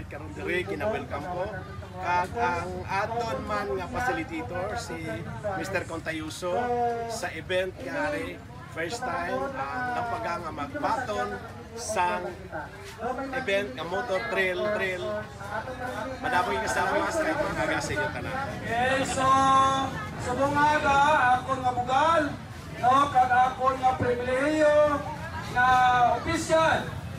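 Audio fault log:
14.65–17.89 s, doubled audio track: a second, full-band copy of the sound runs about 400 ms behind the original and roughly 5 dB quieter, so every onset is answered by a flat, distinct repeat rather than a smeared echo. The copy carries no decay or room colour, and it appears and vanishes abruptly at both edges of the span. This is likely a second capture of the same signal through a slower path being mixed back in.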